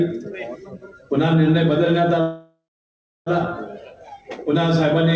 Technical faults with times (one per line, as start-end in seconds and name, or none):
2.21-3.29 call audio freeze